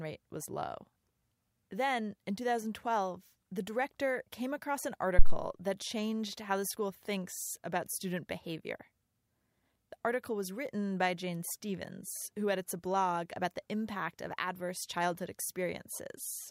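At 5.19 s, after "director came across an", a phantom power thump: a supply switched on or off on the live input sends a step through the coupling capacitors. It is a deep thump peaking at about -6 dBFS and decaying in 46 ms, seen as a tall low-frequency waveform spike and a bright band at the spectrogram's bottom, gone by 5.39 s, before "that changed how the".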